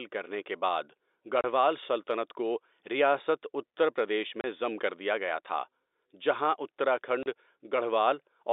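Packet loss filled with silence cuts the speech three times: at 1.41 to 1.44 s, just before "سلطنت کو ریاست اتر"; at 4.41 to 4.44 s, between "کو ریاست اتر پردیش" and "ضم کر"; and at 7.23 to 7.26 s. Each gap is 30 ms of dead air, which fits one lost 30 ms packet replaced by silence. The gaps have abrupt edges, heard through the narrow telephone band of the G.711 link.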